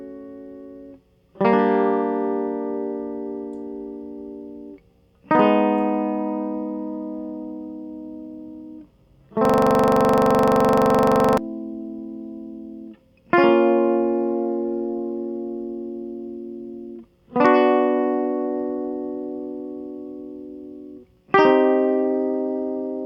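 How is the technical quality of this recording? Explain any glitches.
The music is interrupted by one glitch. A system hang loop runs from 9.45 to 11.38 s. The playback system stalled while the audio hardware kept replaying the last buffer it held. A 42.67 ms slice of the music repeats exactly, about 45 times, which fits a 2048-sample buffer. At 23.4 repeats per second the loop sits between a coarse buzz and a rapid stutter, a frozen mechanical rattle until the music resumes.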